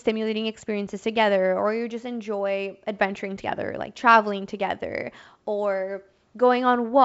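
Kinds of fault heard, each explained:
No faults heard; the audio carries the band limit and faint upper-band hiss of G.722 wideband coding, consistent with its full 64 kbit/s mode.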